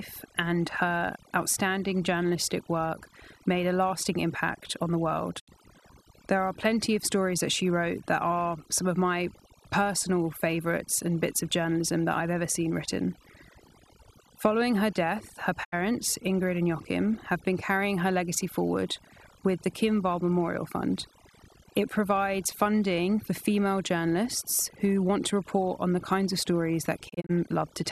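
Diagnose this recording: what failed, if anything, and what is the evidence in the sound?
Overdone noise removal in the processing stage runs throughout. Spectrogram pauses show near-black background with twinkling isolated specks, and quieter parts of the speech are cut along with the noise.

Digital broadcast dropout at reception: fades to silence near 5.38–5.49 s and 15.63–15.74 s, then scattered short holes over 27.08–27.31 s; the waveform shows flat gaps with 20 ms ramps.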